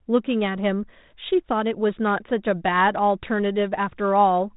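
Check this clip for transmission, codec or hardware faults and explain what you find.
No faults are present: the speech arrives through a G.726 ADPCM path running normally at 32 kbit/s, which leaves only a light coding grain and a band that stops at 3.8 kHz, as that telephone codec should.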